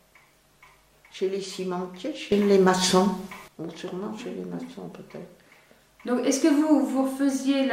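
At 2.32 s a sudden gain jump lifts the sound and its background noise together by about 12 dB until 3.48 s, likely an unramped digital gain step.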